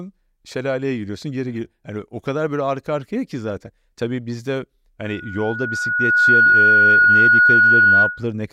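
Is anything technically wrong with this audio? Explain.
Yes. From 5.04 s to 8.24 s there is loudspeaker feedback squeal. A microphone is picking up the loudspeaker it drives, and at 1.4 kHz the loop gain exceeds one, so that frequency keeps reinforcing itself. The tone swells over about a second and a half until it sits roughly 15 dB above the speech. Unlike a steady interfering tone or hum, it grows from nothing into a piercing single-pitched squeal.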